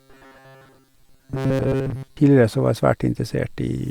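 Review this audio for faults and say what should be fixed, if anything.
From 0.01 s to 2.18 s, ending just before "så var", the speech has a robotic sound with a rigid, metallic buzz at 134 Hz that only loosely tracks the speech. The likely cause is repeated short buffers: audio arrived too seldom, so the playback path looped the last block of about 7.5 ms, which is one over 134 Hz, while the skipped audio was lost. Roughly 70 percent of that stretch sounds like repeated material. To prevent it, give the input stream enough buffering and scheduling priority that new audio always arrives before the last block has to be reused.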